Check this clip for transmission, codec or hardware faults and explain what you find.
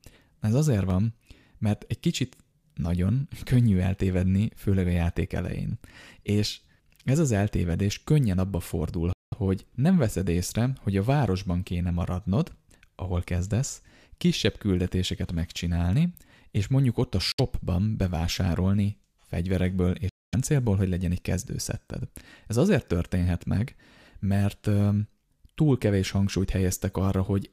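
Two kinds of fault are present in this speech clip: two isolated clicks and three short silent gaps.

Dropped samples: single sharp clicks at 0.90 s and at 14.33 s, the second between "kéne maradnod ahol kezdesz" and "küldetéseket megcsinálni és mondjuk". Each is likely caused by less than a millisecond of samples missing, so the waveform jumps abruptly to a later value.

Bluetooth dropout: the sound cuts to silence from 9.13 to 9.34 s (192 ms), 17.32 to 17.40 s (64 ms) after "és mondjuk ott a", and 20.09 to 20.34 s (about 235 ms) before "hogy legyen egy kezdőszetted". Playback then resumes further along, likely because audio packets arrived too late for the wireless link and were discarded.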